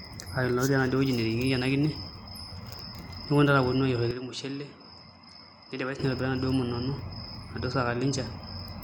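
At 4.11 s the speech suddenly loses its top end, with nothing above 10.5 kHz, drops by roughly 10 dB and picks up a faint new noise floor sitting well below the signal. There's no gap at the change, and at 5.99 s the full brightness and level snap back. That abrupt dull-then-clear shift sounds like the input switched to a poorer device, likely a different microphone or a headset profile, for those couple of seconds.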